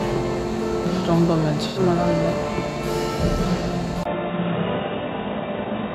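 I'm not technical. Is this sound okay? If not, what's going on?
No, there are two problems. At 1.67 to 1.79 s there's a brief smeared, slightly noisy blip, which is AAC frame loss with concealment. About 85 ms of audio, which fits two lost frames, went missing, and the decoder patched the gap by guessing from the sound just before.

From 4.03 s to the end, the sound suddenly turns duller and boxier, with nothing above 3.8 kHz, a faint new background hiss and a tiny 20 ms dropout right at the change. The loudness stays about the same. That pattern most likely means the input switched to a poorer device partway through the recording.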